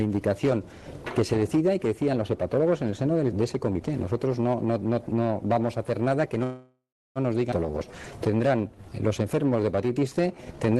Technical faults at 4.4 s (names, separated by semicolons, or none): none